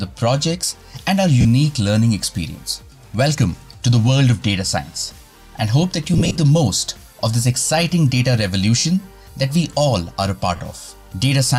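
Brief noisy smears replace the sound at 1.41 to 1.45 s, 8.79 to 8.85 s and 10.56 to 10.60 s, lasting 40 to 60 ms each. Between 6.14 and 6.38 s there is a choppier stretch where about 120 ms of gaps are scattered across 240 ms, the longest run roughly 40 ms. These are lost LE Audio frames: the LC3 decoder fills each gap by repeating the last spectrum with randomised signs, which fits 10 ms frames.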